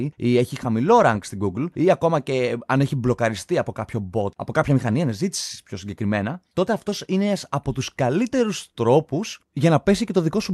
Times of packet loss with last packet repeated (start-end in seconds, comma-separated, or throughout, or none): none